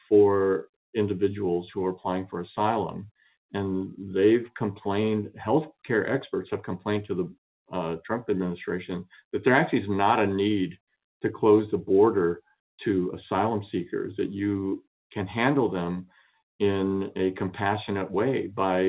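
No faults can be heard: the sound carries the ordinary marks of a call path, with the microphone processing trimming the deepest bass and the band stopping at 4 kHz, which fits a narrowband telephone codec such as G.711 mu-law.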